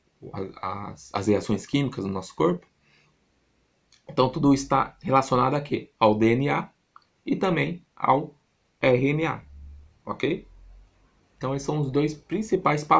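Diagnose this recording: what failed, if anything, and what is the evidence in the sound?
Nothing failed here.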